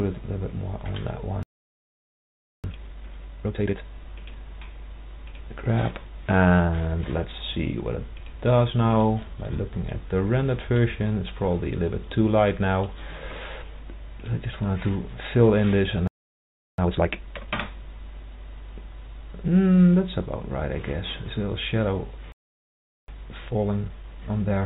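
At 1.43 s the sound just stops dead for about 1.2 s until 2.64 s, a playback stall. The player was likely starved of data or had its thread blocked, so the output went silent mid-flow. From 2.64 to 3.84 s it races through the backlog at twice normal speed, a time-compressed catch-up: small pieces get cut and cross-faded out, so the audio sounds hurried but keeps its pitch.

Around 4.62 s there's a skip ahead with no gap at all. Roughly 0.7 s of audio just isn't there, dropped while later material was already queued, so the two sides butt straight together and the delay falls by about the same amount.

From 6.39 to 8.86 s the jitter buffer speed-up kicks in. The buffer was holding more than it wanted, so the receiver kept trimming pitch-period-sized slivers, about 0.3 s in total. That runs things at 111% speed, a bit rushed, same pitch, all heard through the narrow call-codec band with nothing above 4 kHz.

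Two more stalls follow the same pattern. The first runs 16.08 to 16.78 s, about 0.7 s of silence, followed by a 2x catch-up until 17.48 s. The second runs 22.32 to 23.08 s, about 0.76 s, and the catch-up after it is gentler, 1.15x, running to the end of the clip.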